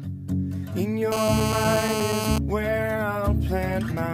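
From 1.12 s to 2.38 s a hard, raspy buzz at about 217 Hz, rich in harmonics, sits steadily over the sound at only about 2 dB below it. This is GSM phone buzz: a nearby 2G phone in a call transmits bursts 217 times a second, and the audio circuit rectifies those radio pulses.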